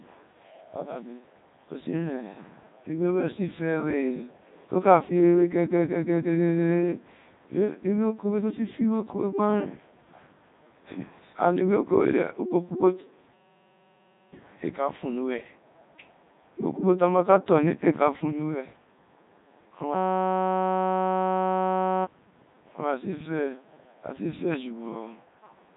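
From start to finish the speech has a robotic, buzzy quality, with voiced sounds turned to a synthetic hum and nothing above 3.8 kHz. This is heavy Codec 2 vocoder damage. Only pitch, voicing, energy and a rough spectral shape are carried, and the decoder rebuilds the voice from sine waves rather than the original waveform. The degree of damage fits Codec 2's 3.2 kbit/s mode.

From 13.34 to 14.34 s the audio gives way to a steady, harsh buzz at 188 Hz, ending just before "éé ka fua". From 19.94 to 22.05 s the same buzz returns for about two seconds. Both are a system hang loop. The machine stalled while the audio hardware kept replaying one 5.33 ms fragment, which fits a 256-sample buffer. About a second of audio is lost in the first loop and about two in the second.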